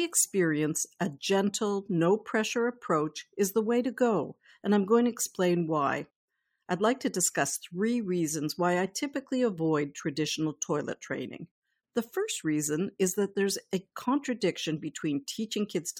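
Listening to the speech in this recording, nothing stood out as technically wrong at any point.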